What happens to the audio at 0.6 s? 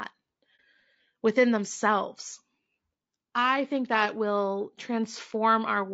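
Right around there, from 0.56 to 0.60 s, there's a brief dip in the speech from AAC frame loss with muting. A chunk of coded audio didn't arrive, and the decoder filled its spectrum with zeros instead of guessing. Because AAC frames overlap, the sound fades down and back up over roughly a frame rather than cutting hard, so you get a quick dip of about 30 ms.

Underneath that, the whole clip has a rough, grainy texture, with noise sitting between the harmonics and a top end that sounds thinned or a bit synthetic. That's likely low-delay AAC compression, the AAC-ELD flavour used in video calls. The plainly audible damage here fits a fairly low bitrate, around 32 kbps.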